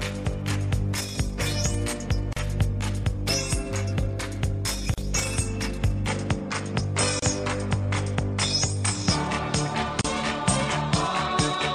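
At 2.33 s and 4.94 s, gaps at joins of encoded pieces open for 36 and 38 ms. Separately encoded segments were spliced without trimming, leaving encoder delay and padding as short silences before the sound resumes.

From 6.08 s the sound turns duller with no break and no level jump: nothing remains above 9.6 kHz, and a new noise floor sits roughly 35 dB below the signal, likely from the input switching to a poorer device.

Further join gaps follow at 7.19 s (29 ms) and 10.01 s (34 ms).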